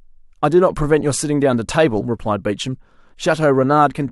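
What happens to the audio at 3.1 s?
Nothing goes wrong at 3.1 s; the speech continues intact through that moment.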